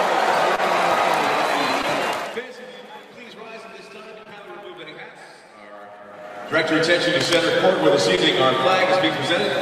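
Short concealed packet loss at 0.55, 1.82, 4.23 and 8.15 s: about 20 ms went missing each time, leaving brief smears where the spectrogram shows stretched, blurred harmonics. Cable scratch noise from 7.20 to 7.36 s, likely a disturbed cable contact, adds jagged broadband bursts about 10 dB below the signal, seen as ragged spikes in the waveform.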